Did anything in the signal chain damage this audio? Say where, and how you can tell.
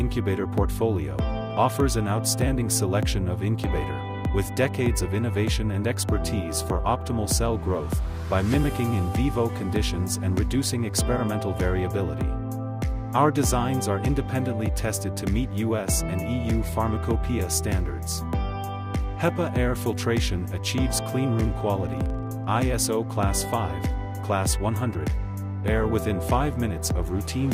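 Yes. A filter restarted on every block, from 21.76 to 22.8 s, in the block-based processing stage. There is a low buzz of regular ticks at about 23.4 Hz whose loudness follows the sound's level. The filter's memory is cleared at each block boundary, so every block starts from silence and opens with a small transient. A tick rate of 23.4 Hz fits a 2048-sample block.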